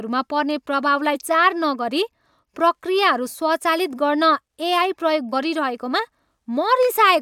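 Damaged data in a compressed stream breaks into this speech clip twice: from 1.14 to 1.16 s, between "पर्ने प्रभावलाई" and "नगरी प्रक्रियाहरू", and again at 5.32 s. Each is a short blip where the decoder hits corrupted bytes in the compressed stream, misreads or drops the affected frames, loses sync, and skips ahead to the next valid frame header.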